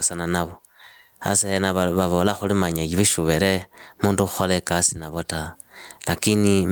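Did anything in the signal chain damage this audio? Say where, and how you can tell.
Yes. Gain pumping runs through the whole speech clip. Between phrases the background swells up, then ducks hard under each loud syllable, a swing of roughly 20 dB. Levels sound squashed. The likely cause is input gain set far too high, with a fast limiter or compressor in call processing clamping it down.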